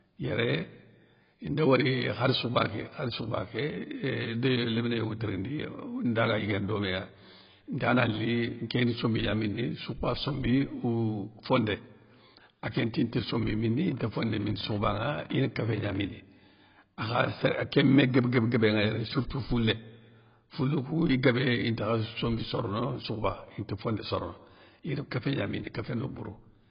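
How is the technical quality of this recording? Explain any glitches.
Technical quality is poor: the speech is heavily compressed throughout, and a burst of clicks cuts across the middle.

Throughout, the speech sounds dull and smeared, with a warbling, fizzy edge on sibilants and nothing above 5.2 kHz. This is likely AAC compression at a very low bitrate, around 16 kbps. The encoder drops the top band and coarsely quantises the rest. A spectrogram shows a hard ceiling at 5.2 kHz and patchy, holed bands below it.

From 13.91 to 15.96 s, a train of clicks ticks over the sound at about 11.8 per second, irregularly spaced, roughly thirty in all and about as loud as the speech itself. The likely cause is interference or a faulty connection injecting pulses. On the waveform they appear as thin vertical spikes, and on a spectrogram as broadband vertical lines.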